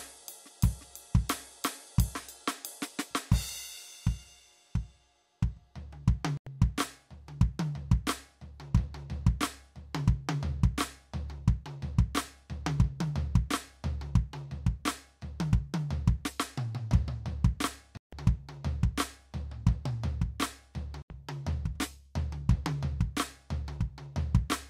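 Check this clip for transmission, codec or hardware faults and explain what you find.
The music drops out three times, and each gap sounds like a Bluetooth stall. The music cuts to silence at 6.37–6.47 s (about 90 ms), 17.97–18.13 s (about 150 ms) and 21.02–21.10 s (about 80 ms), then carries on. The likely cause is radio interference delaying packets on the wireless link until the headphones' buffer emptied, so playback halted until the resent data arrived. A lossy codec glitch would smear or warble the music. These gaps are clean, full stops.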